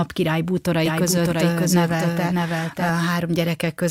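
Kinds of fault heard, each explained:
Doubled audio track: the speech repeats about 0.7 s behind itself at roughly equal level, dry, starting and stopping abruptly, likely from a slower second capture path.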